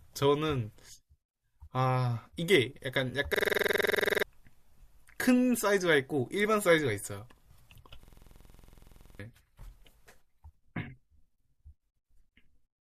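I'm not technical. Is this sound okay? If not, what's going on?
No. At 3.34 to 4.23 s and 8.03 to 9.20 s there's a system hang loop. The computer froze and replayed the same 46 ms slice of speech about 21 times a second, a rapid machine-gun stutter, and each time about a second of speech was lost.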